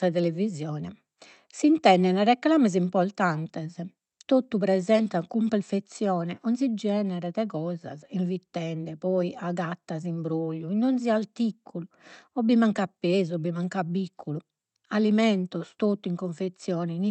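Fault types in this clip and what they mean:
No faults can be heard in this speech recording.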